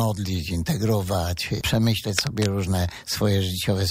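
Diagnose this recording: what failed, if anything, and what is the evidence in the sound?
Cable scratch noise appears from 2.16 to 2.48 s, a burst of dense, irregular crackling and rustling lying over the sound for about a third of a second, only a few decibels below the signal itself. This places the failure in the analogue wiring. The likely cause is a worn cable, connector or control being moved, so that its contact resistance jumps erratically and modulates the signal path with ragged noise until the contact settles again.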